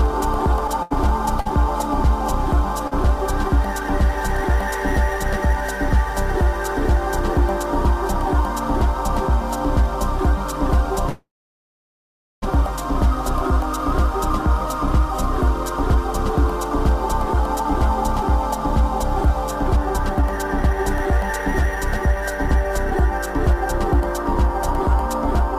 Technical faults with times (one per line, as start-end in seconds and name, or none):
0.67-1.47 repeated stalls (stutter)
2.87-2.93 short stall from a late packet
11.09-12.44 call audio freeze
15.92-24.36 jitter buffer speed-up